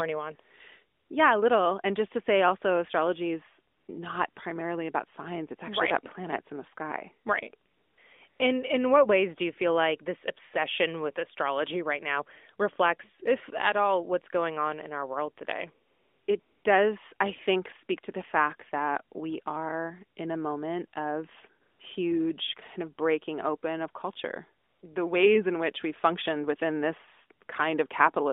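Nine AMR comfort noise gaps, 60 to 400 ms long, from 0.98 s to 24.8 s, replace pauses with smooth synthetic hiss rather than dead silence.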